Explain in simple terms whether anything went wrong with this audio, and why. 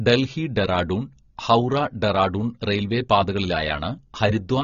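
The speech sounds dull and watery from beginning to end, with nothing above 7 kHz. That is most likely AAC compression squeezed too hard. Unlike a plain muffling filter, it also leaves a warbling, fizzy texture on hissy sounds such as s.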